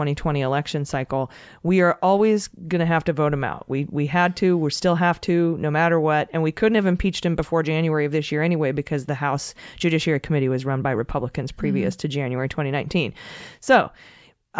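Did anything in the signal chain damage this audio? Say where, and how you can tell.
No, no damage in the chain.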